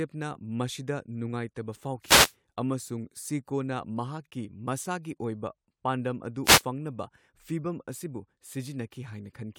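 A brief swish of static breaks through the speech from 2.02 to 2.34 s, just before "ꯑꯃꯁꯨꯡ ꯁꯤꯀꯣꯅ", and again from 6.43 to 6.63 s, right after "ꯃꯁꯥꯒꯤ ꯑꯣꯏꯕ ꯄꯥꯟꯗꯝ ꯑꯗꯨ". Each is a wireless microphone noise hit: reflections cancel the FM radio signal, so receiver noise rises.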